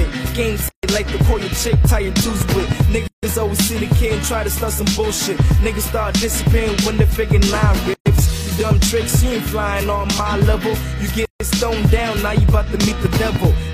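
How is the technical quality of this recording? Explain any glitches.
The recording has four short dropouts: one early stall and three gaps where separately encoded pieces were joined.

From 0.69 to 0.83 s the sound cuts out for about 148 ms, then carries on. That's a playback stall, likely the player running dry of data or its thread getting blocked for a moment. Output just falls silent until it catches up, so you hear a brief hole in the middle of the flow rather than any distortion.

The other three are gaps at a join of encoded pieces: 3.08 to 3.23 s (about 154 ms), 7.94 to 8.06 s (about 122 ms), and 11.25 to 11.40 s (about 152 ms). Each piece went through the encoder on its own, picking up leading delay silence and end-of-frame padding, and nobody trimmed that before stitching. So the sound drops out with smeared edges, then resumes right where it left off.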